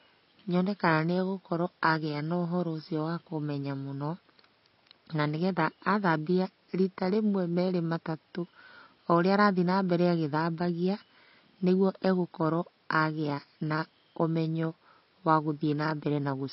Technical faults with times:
0.00-16.52 AAC compression

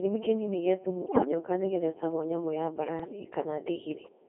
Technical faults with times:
0.00-4.29 Codec 2 vocoder
1.06-1.31 bit errors on digital voice radio
2.99-3.19 bit errors on digital voice radio

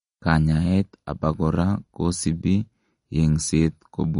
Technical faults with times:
0.00-4.20 MP3 compression

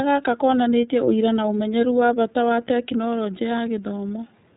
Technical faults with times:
0.00-4.56 iLBC codec

